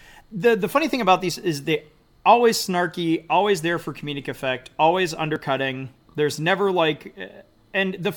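At 5.36 s, just after "for comedic effect always", two stream segments carry overlapping time stamps, so the player trims a few milliseconds of audio that was never actually duplicated. This overlap between stream segments makes the speech waveform jump, heard as a brief click or tiny skip.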